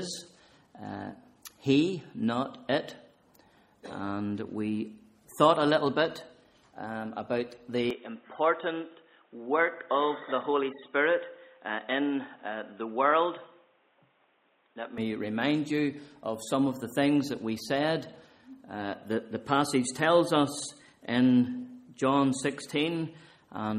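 Input switched to a poorer device, 7.9 to 15.0 s: the sound abruptly dulls, drops about 5 dB, loses everything above 3.8 kHz and gains faint new noise, likely from a lesser microphone.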